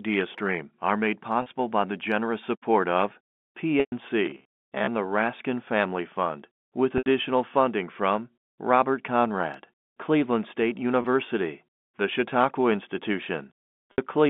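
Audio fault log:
1.42, 3.80, 6.98, 11.02 and 13.92 s, packet loss with pitch repetition: gaps of 40, 120, 80, 20 and 60 ms are bridged by a repeated pitch period, so there's a brief held buzz, with the 120 ms one fading out.
4.26–4.89 s, robotic sound from repeated short buffers: a rigid metallic buzz at about 67 Hz, with roughly half the audio replaced by repeats, likely from audio arriving too seldom, which fits a buffer of about 15 ms.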